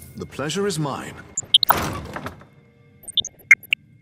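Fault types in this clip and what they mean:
DAB burbling: bit errors from weak reception slip past error correction into the MP2 data, putting short blips of noise in single sub-bands.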